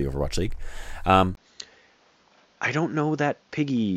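At 1.35 s the speech drops out for about 20 ms. It then returns duller and boxier, and stays that way to the end. Nothing above 7.2 kHz remains. A faint new background noise appears, while the level holds steady. The input likely switched to a poorer device.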